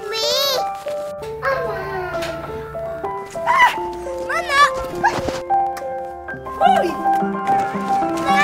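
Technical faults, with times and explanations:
0.11 to 8.35 s: periodic USB or driver dropouts. A tiny sliver of audio is skipped every 64 ms. The gaps click regularly wherever there is signal.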